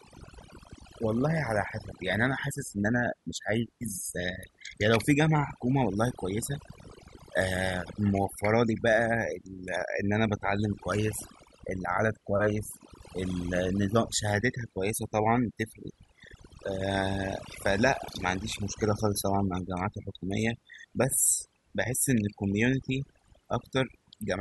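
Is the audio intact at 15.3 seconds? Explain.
No, 15.3 seconds falls inside a stretch where overdone noise removal runs through the whole clip, so that moment carries the same damage as everywhere else. The noise reducer was pushed too hard: any frequency band sitting close to its noise estimate gets pulled way down or dropped entirely, and softer parts of the speech get caught in that too. You hear it as a background that drops and breaks up into little twinkling specks.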